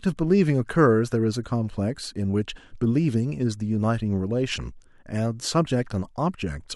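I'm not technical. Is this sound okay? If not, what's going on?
Yes, this sound is okay; nothing is going on that needs fixing.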